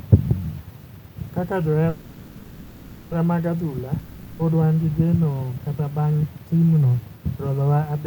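A call audio freeze runs from 1.89 to 3.13 s, just before "mag adhula". The last sound is stretched into a fading buzz for about 1.22 s, most likely because packets stalled and the jitter buffer emptied. The speech then resumes where it stopped, now running 1.22 s late, with nothing lost.

A long network dropout follows from 3.99 to 4.41 s, between "mag adhula" and "wan gi geno kata". The sound decays into a fading hiss for about 0.4 s, and the speech returns further on, with that 0.4 s of audio likely never received.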